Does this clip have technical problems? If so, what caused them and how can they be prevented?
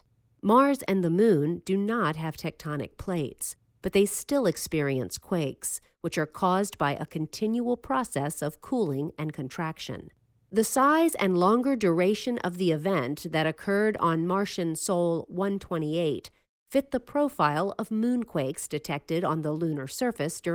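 No, there are no technical problems to fix in this clip. The speech shows the light marks of Opus voice compression working in hybrid mode at full bandwidth, which fits a bitrate of around 24 kbps.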